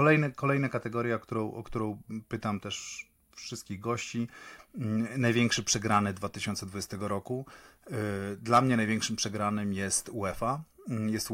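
No technical faults turn up anywhere in the recording, so there is nothing to describe in time order.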